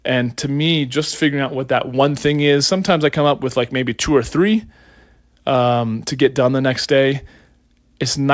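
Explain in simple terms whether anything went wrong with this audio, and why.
Nothing went wrong in this speech clip. It went through an ordinary internet call connection, the WebRTC call path, and you can hear that in the way the sound stops at about 8 kHz, which fits a wideband call codec such as G.722.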